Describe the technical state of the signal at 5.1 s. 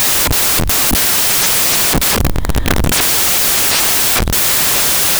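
At 5.1 s the audio is still affected by samples built from the wrong bytes, a fault that runs from the very start of the clip to its end. The reader is assembling each sample from misaligned or wrongly ordered bytes, so the rapidly fluctuating low-order bits end up as the dominant part of every value. The speech is overlaid with loud, harsh broadband noise at this point.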